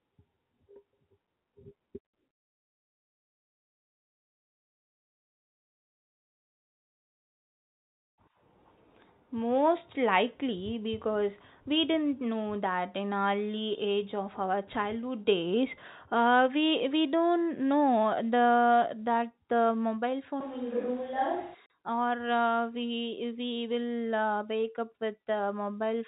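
A switch to a distant microphone, at 20.41 to 21.54 s right after "the that the mobile", is the likely cause of this speech clip's voice suddenly turning roomy and hollow, with thinner bass and room noise roughly 25 dB below the speech, though the level barely changes. Packet loss filled with silence follows at 21.66 to 21.70 s: a 40 ms hard-edged gap, consistent with two 20 ms packets, is replaced by silence. Throughout, the G.711 telephone band stops at 4 kHz.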